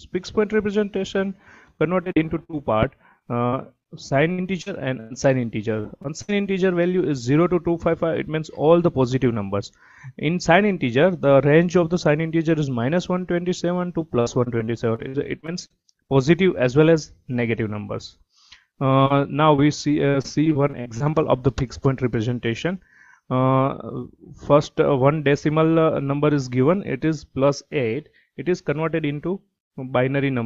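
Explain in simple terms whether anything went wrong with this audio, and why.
Repeated packet loss (robotic sound) affects four stretches: 1.77 to 2.55 s, 3.19 to 5.12 s, 14.20 to 16.23 s, and 19.04 to 21.15 s. In each, small pieces of the audio failed to arrive in time, over and over. Each time, the receiver covered the hole by stretching the sound just before it. Those patches come so close together that the sound turns choppy, with bits missing throughout.

Short concealed packet loss happens twice, at 5.80 to 5.86 s (about 40 ms lost) and at 6.02 to 6.06 s (about 20 ms lost). Each time a tiny slice of audio never showed up. The receiver invented a stand-in from the sound just before it, then slid back into the real audio. You hear a brief smear or wobble rather than a clean gap.

A burst of packet loss hits at 6.22 to 6.30 s, where about 60 ms went missing in one go. The receiver kept the last bit of sound going and let it fade while it waited. 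The audio then picks up again further along, and whatever fell inside that gap is simply gone.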